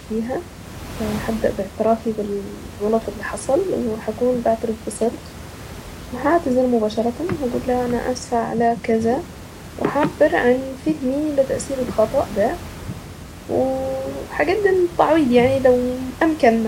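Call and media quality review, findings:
No faults found; room background noise sits about 16 dB below the speech and belongs to the recording environment, not the system.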